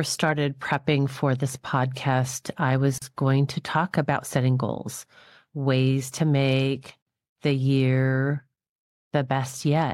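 Separately encoded pieces of speech were joined, apparently every 4 s, without trimming encoder delay and padding, leaving a gap at a join of encoded pieces: a 39 ms gap from 2.98 to 3.02 s with smeared edges.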